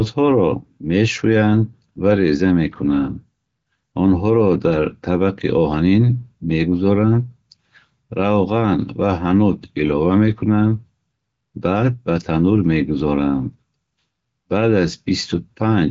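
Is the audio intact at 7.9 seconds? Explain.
Yes, the audio is intact at 7.9 seconds, with no fault at that point.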